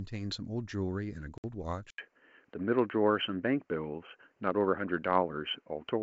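At 1.38 to 1.45 s, a packet loss on an ADPCM call leaves a hard-edged 60 ms hole, a few packets' worth. Unlike a simple dropout, the speech comes back with brief distortion while the decoder's predictor and step size resynchronise with the sender's.

From 1.90 s to the end, an 80 ms silence is followed by narrowband sound with nothing above 3.1 kHz, a level shift of a few decibels and a faint new noise floor. The likely cause is an input switched to a poorer device. Codec trouble would not change tone, level and noise all at once. Before the switch, the G.722 coding carries clear wideband speech.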